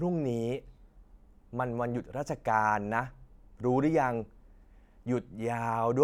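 Listening to the speech recording, nothing stood out as a technical fault at any point.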